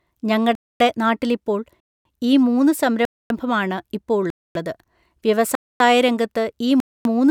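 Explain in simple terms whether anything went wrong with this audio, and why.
The speech keeps stopping dead for a quarter second at 0.55, 1.80, 3.05, 4.30, 5.55 and 6.80 s: a gap between chunks. Unlike a dropout, no sound is lost; it just pauses between one-second pieces.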